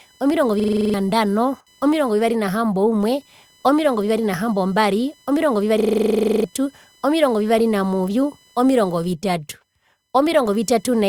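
A faint buzzing chirp around 1 kHz, roughly 35 dB below the speech, runs throughout. This is computer activity noise: processor or peripheral load disturbing the audio circuit's shared ground.

From 0.60 to 0.94 s a 42.67 ms fragment repeats eight times as a machine-gun stutter at 23.4 Hz. It happens again from 5.80 to 6.44 s, just after "omirongo vivari nahambombari omirongo", this time with fifteen repeats. Both are a system hang loop: the computer froze while the sound hardware kept replaying one buffer, which fits a 2048-sample buffer. Roughly a third of a second of real audio is lost the first time and about 0.7 s the second.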